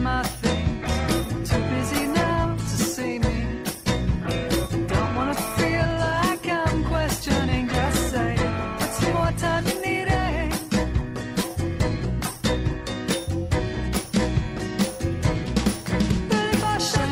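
From 0.85 s to 12.85 s the adaptive stream switches to a lower bitrate. The quality shifts abruptly with no gap: codec artefacts thicken, which fits a fall from 64 to 16 kbit/s Opus after the connection slowed.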